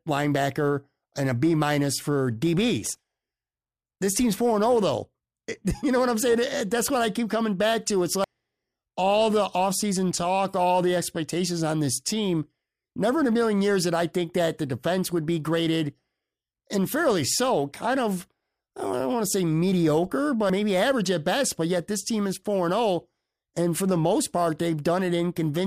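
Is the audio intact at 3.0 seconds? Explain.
Yes, at 3.0 seconds the speech plays through intact, with no fault of any kind at that moment.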